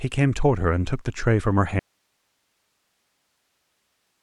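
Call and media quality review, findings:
Audio dropout to a faint residue, 1.79 s to end of clip. Speech cuts abruptly mid-flow and leaves only hiss roughly 50 dB down. Likely upstream signal loss with the downstream path still live. Waveform: sudden collapse to a thin noise floor. Spectrogram: featureless broadband haze, no harmonics.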